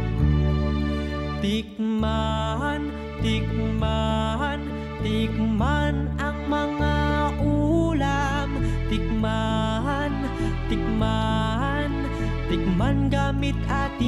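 Nothing technically wrong can be heard anywhere in the audio. There is no event to time and no cause to point to.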